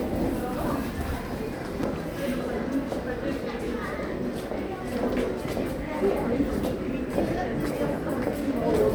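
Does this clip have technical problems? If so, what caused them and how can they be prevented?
Yes, there are two loud pops, each roughly 10 dB above the sound: a quick double pop between 1.83 and 1.98 s, then a single one at 5.45 to 5.48 s. The likely cause is a sudden voltage pulse, such as a plug, switch, or static discharge, hitting the line while the sound carries on underneath. Keep connections secure, avoid switching gear mid-take, and ground everything to prevent it.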